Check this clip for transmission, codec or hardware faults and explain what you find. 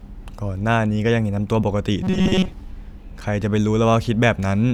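One fault stands out, robotic sound from repeated short buffers, between 2.03 and 2.52 s. The speech turns into a rigid metallic buzz fixed at 188 Hz that still loosely follows the syllables. The likely cause is audio arriving too seldom, so the player keeps repeating a segment of about 5.3 ms while most of the real audio in that stretch is skipped. Ordinary dropouts leave silence or clicks, and jitter stutters irregularly, but this buzz holds one steady pitch set by the repeat length.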